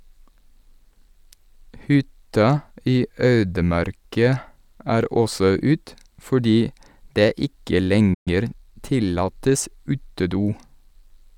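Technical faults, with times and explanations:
8.14 to 8.28 s, playback stall: Right after "det ikke" the speech cuts out abruptly into silence for about 120 ms, then resumes where it stopped. This gap is likely the player running out of buffered data, or its output thread being briefly blocked, so nothing reached the output until it recovered.
8.28 to 8.76 s, time-compressed catch-up: Immediately after the gap, the speech sounds rushed, about 1.25 times normal speed, with pitch unchanged. The player shortens its backlog by removing tiny slices of audio and cross-fading across the joins, which produces that hurried delivery.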